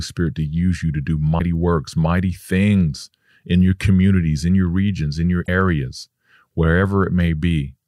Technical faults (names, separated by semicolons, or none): clock slip clicks; damaged data in a compressed stream